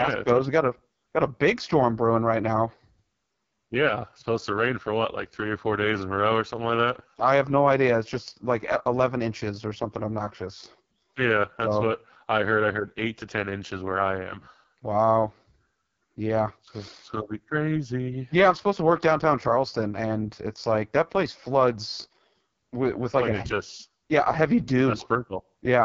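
From start to finish the speech passes through the AMR wideband (HD Voice) codec at what sounds like its lowest rate, near 6.6 kbit/s, so the vocal tract model runs short of pulses. Voices turn rough and raspy, with heavy coding damage and nothing above 7.5 kHz.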